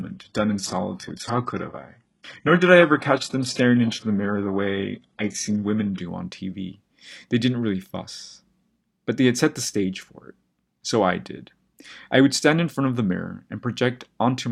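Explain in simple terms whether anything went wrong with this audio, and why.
Adaptive stream starting at a low bitrate, from 0.0 to 6.0 s: the player began on a low-quality version of the stream to start quickly, so the speech sounds dull and smeared. At 6.0 s it switches to a better version and clears up suddenly, without a gap.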